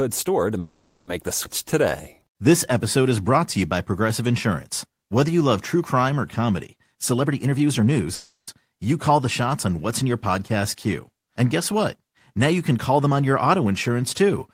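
From 0.59 to 1.10 s, a call audio freeze, likely from packets held up and an empty jitter buffer: about 480 ms of continued, fading buzz replaces nothing, and the speech resumes where it stopped. At 1.43 to 1.47 s, a skip ahead drops roughly 150 ms, joining the two sides almost directly. From 1.63 to 2.65 s, a jitter buffer slow-down repeats pitch periods to rebuild reserve, adding 140 ms. Speech runs at 87% speed, same pitch, drawn out. From 6.95 to 8.09 s, a jitter buffer speed-up trims pitch periods to cut excess delay, removing roughly 300 ms. Speech hurries at 124% speed. From 8.15 to 8.51 s, a second call audio freeze fills 330 ms with fading sound ending in 150 ms of silence. From 12.71 to 13.12 s, a milder speed-up runs at 109%, removing around 40 ms.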